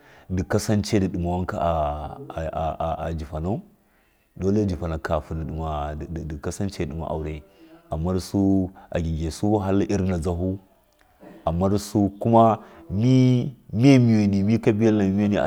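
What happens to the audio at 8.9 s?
Nothing goes wrong at 8.9 s: the speech continues intact through that moment, with no dropout, click, glitch or other audible fault.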